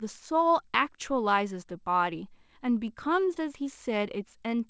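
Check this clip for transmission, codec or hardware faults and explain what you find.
One transmission fault is audible, heard through a call path whose spectrum stops at 8 kHz, which fits G.722. From 3.34 to 3.38 s, short concealed packet loss: about 20 ms of speech never arrived, and the receiver extrapolated the previous sound, heard as a brief smear. A spectrogram shows harmonics frozen or blurred there, and the waveform shows the fill before blending back.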